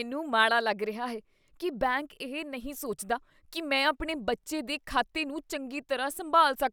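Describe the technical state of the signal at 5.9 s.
At 5.9 s the signal is intact, with no audible fault at that point.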